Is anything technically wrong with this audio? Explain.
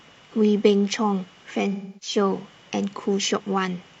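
Yes. From 1.72 to 2.17 s, AAC frame loss with concealment: the decoder fills the missing stretch of speech from earlier spectrum, leaving a smeared, noisy patch.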